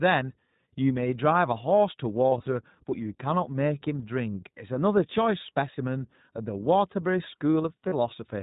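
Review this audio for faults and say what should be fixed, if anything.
The speech passes through the iLBC codec for its whole length. It is a narrowband VoIP coder whose 20 ms framing and roughly 15 kbps rate fit its standard higher mode. Everything above 4 kHz is gone, and the voice sounds plainly rough and synthetic. Sending speech over a wideband codec such as Opus or G.722 would prevent this.

Lost iLBC frames occur from 2.30 to 2.48 s and again from 7.88 to 7.94 s. Missing packets force the decoder to repeat the last pitch cycle mixed with noise. The first stretch scatters about 80 ms of loss over 160 ms, with runs up to around 40 ms. The second loses about 40 ms. Each gap sounds like a briefly held, buzzy vowel, and the speech recovers immediately afterward. A jitter buffer with forward error correction or redundant packets would prevent this.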